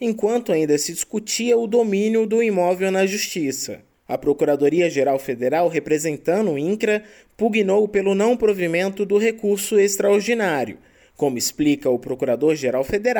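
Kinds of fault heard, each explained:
No faults of any kind can be heard in this audio.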